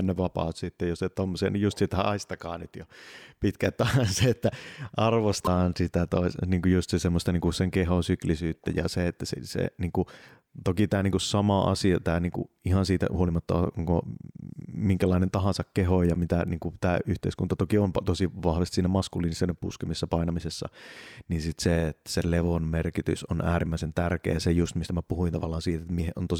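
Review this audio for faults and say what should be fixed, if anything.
Damaged data in a compressed stream causes two brief glitches, at 5.44–5.48 s just before "sitä tois niin kuin" and at 25.96–26.00 s. Corrupted frames make the decoder lose sync. Verify file integrity with checksums and use error-protected transfer.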